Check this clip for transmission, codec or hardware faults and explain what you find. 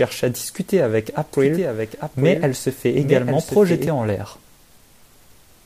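A doubled audio track runs from 1.33 to 3.87 s. A full-band second copy of the speech trails about a second behind, somewhat quieter, likely from a slower second capture path, and starts and stops abruptly.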